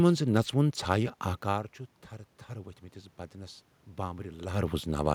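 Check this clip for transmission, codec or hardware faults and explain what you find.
One fault, automatic gain rising, from 2.49 to 5.1 s. After the input level fell by about 14 dB, the gain control slowly lifted its gain by about 4 dB, so the speech and room noise swell together. That shared rise is what separates it from the talker moving, as around 1.5 and 4.5 s, where only the voice changes.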